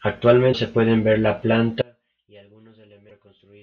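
At 0.52 to 0.55 s the speech skips forward. The likely cause is a broken MP3 bit reservoir: frames were cut from the stream, and the next frame reached back into the reservoir for its data and decoded bytes from a different frame. The result is a short glitch, about 28 ms long, on the scale of a single 24 ms MP3 frame, coming right after a jump ahead in the speech.

At 1.82 s the signal most likely suffered an audio dropout to a faint residue. The wanted speech was lost while the path after the break stayed live. The cut is sudden, not a pause or a fade, and from there to the end only a faint trace remains, about 30 dB below normal level.

Inside that gap, at 3.09 to 3.11 s, the same broken bit reservoir likely produces another brief glitch from a misread frame.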